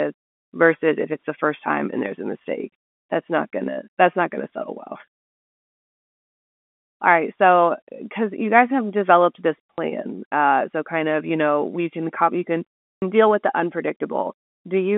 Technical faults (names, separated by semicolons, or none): packet loss with last packet repeated